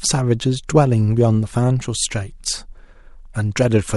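Around 0.67 s there's pre-echo: a short hiss, roughly 14 dB up, smears ahead of an attack, which points to a long transform block without short-block switching.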